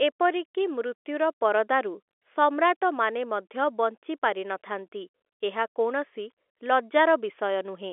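No technical faults can be heard in the speech, which sits in the 300 Hz to 3.5 kHz band of an ordinary telephone line, consistent with standard 64 kbps G.711 mu-law coding working as intended.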